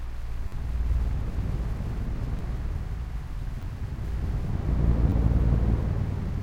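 A repeated buffer occurs at 0.48 to 0.52 s, 2.39 s, 3.62 s and 5.10 to 5.12 s. New audio arrived late, so a 10.67 ms piece replayed, which fits a 512-sample buffer. Each repeat joins hard. Each is heard as a click or brief buzz.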